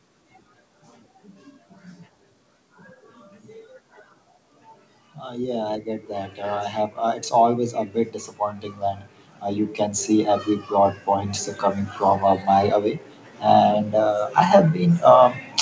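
From 5.26 to 7.78 s the automatic gain control judged the input too quiet and raised its gain step by step, lifting the level by about 5 dB; the speech and the background noise swell together rather than the talker getting louder alone. The automatic gain rising happens again from 8.4 to 12.83 s, a slower climb of about 6 dB, over a call path whose audio stops at 8 kHz.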